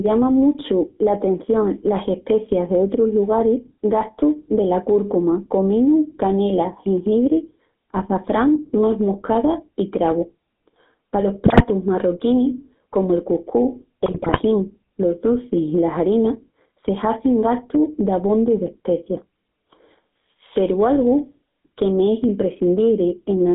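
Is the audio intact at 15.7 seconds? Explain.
No. At 15.7 s, as throughout the clip, there is gain pumping: the level is pulled down on each loud passage, swinging by around 10 dB. This is likely caused by a fast limiter or compressor reacting to input gain set far too high.

The speech also carries the GSM full-rate codec across the whole clip. The band runs from about 200 Hz to 3.7 kHz, and the coarse pulse-driven excitation adds a plainly audible buzzy, gravelly roughness, which fits 13 kbps GSM full rate.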